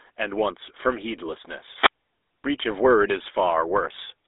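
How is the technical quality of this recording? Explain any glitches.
The quality is rough: the whole clip runs through a GSM full-rate codec, and there's one short wireless mic dropout partway in.

The GSM full-rate codec damage is plainly audible from start to finish. Nothing comes through above about 3.8 kHz, and the band sits roughly between 300 Hz and 3.7 kHz. The codec rebuilds speech from a vocal-tract model fed by a sparse pulse excitation, which fits a 13 kbps full-rate stream. That's where the buzzy, gravelly grain comes from.

At 1.74 s there's a wireless microphone squelch dropout lasting until 1.96 s. The FM radio link fades, a bit of hiss swells up, and the receiver's squelch then cuts the output to near silence for about 92 ms. After that the speech returns.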